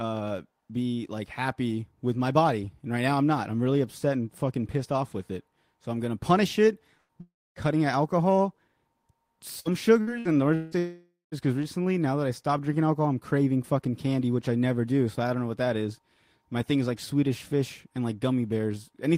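Burst of packet loss at 6.97 to 7.12 s, just after "I'm gonna punish it": about 120 ms of audio is missing. The receiver stretches the last sound and fades it out, then leaves a brief silence.

Long network dropout from 7.21 to 7.59 s: the last sound is held and fades, then goes quiet for about 270 ms. The audio resumes at "out alcohol" with roughly 360 ms lost, likely because nothing arrived over the network during that stretch.

Repeated packet loss (robotic sound) from 9.60 to 10.75 s: four separate holes, the longest 175 ms, are patched by extending the preceding sound. About 30% of the stretch is filled this way, which makes it choppy.

Long network dropout again at 10.78 to 11.35 s: about 540 ms is lost. A held, fading continuation leads into silence, and the audio picks up at "is because recently now".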